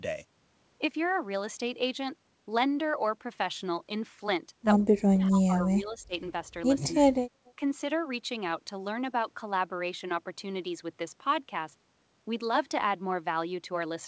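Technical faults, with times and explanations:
4.88–6.14 s, 6.92–7.18 s and 7.56–7.61 s, speech suppressed in double talk: the voice drops in level by around 40 dB, then around 25 dB, then around 5 dB. This is likely an echo canceller treating talker and loudspeaker echo alike during overlap and turning both down.
7.45–7.51 s, echo leak: a delayed copy of the far voice, returning about 0.25 s late and about 35 dB below the speech, slips through. This is likely because the loudspeaker side's echo canceller did not remove everything its microphone captured.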